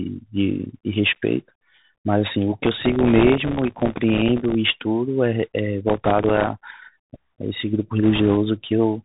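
Throughout the clip the speech has passed through the Bluetooth CVSD headset codec, the narrowband link at 64 kbps that sends one bit per sample to say whether the waveform should step up or down. Because that step size has to adapt, loud high-frequency sounds outrun it. Nothing above 4 kHz survives, s sounds come out scratchy, and a grainy hiss sits under the speech the whole way through. The damage is plainly audible.

From 2.64 to 4.55 s the processor falls behind and misses buffer deadlines in a long run. The gaps are very short, which fits buffers of around a millisecond and a half, and a couple of hundred are dropped. Each one leaves silence with hard edges, so together they form processor overload crackle, a gritty tearing laid over the speech. Inside that stretch, from 3.09 to 3.25 s, bit errors on the Bluetooth voice link add a rushing, crackly noise. The bit error rate is around 2 percent, and because every CVSD bit carries the same small weight, this noise never produces loud clicks.

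The overload crackle returns from 5.88 to 6.47 s in a shorter run of about fifty missed buffers. Within it, from 6.05 to 6.12 s, a denser burst of bit errors at around 4 percent brings a brief, harsher rush. A final patch of bit errors, at around 1.5 percent, runs from 8.03 to 8.37 s as a softer crackly hiss.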